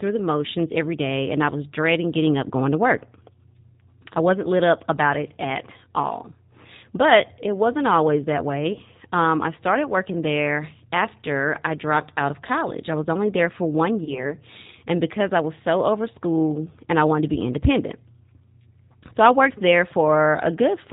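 Throughout, the speech sounds band-limited, slightly rough and synthetic, with nothing above 4 kHz and plainly audible coding damage. That points to the G.729 codec at 8 kbit/s. It rebuilds the speech from a vocal tract filter, a pitch predictor and a few pulses per frame, rather than carrying the waveform itself.

At 8.73 to 8.81 s, just after "it wasn't always that", the speech briefly smears into a stretched, fading sound. At 14.04 to 14.35 s, after "only there for one" and before "and because I was", the same thing happens, and the weakened, distorted sound lingers for about 0.3 s. Each event fits a single lost packet of 30 ms. This is VoIP packet loss concealed by the speech codec. The decoder extended its last pitch and filter with falling gain, and because each frame builds on the previous one, recovery after the gap took time.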